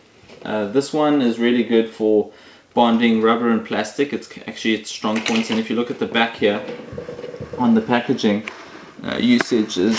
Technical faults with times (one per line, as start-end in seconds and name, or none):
none